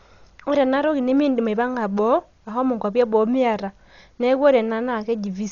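Speech runs dull and muffled for the whole clip, with nothing above 7 kHz, and a rough, fluttering noise clings around the voiced tones, a sign of heavy codec damage. The likely cause is Dolby Digital compression at a very low rate, one that fits about 40 kbps. Starved of bits, the encoder narrows the band and leaves many frequency lines without mantissa data. The decoder then fills those gaps with dither noise, which produces the grainy flutter.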